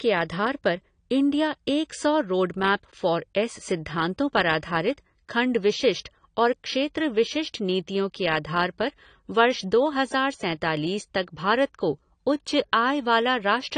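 Across the speech, content stops at 10 kHz, leaving an empty spectrogram band above; the dull, plainly damaged sound likely comes from AAC compression around 32 kbps.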